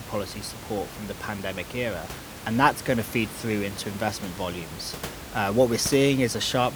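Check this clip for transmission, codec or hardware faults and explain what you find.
No transmission, codec or hardware faults turn up in this speech clip. The room noise behind the speech sits about 13 dB below it and belongs to the recording itself.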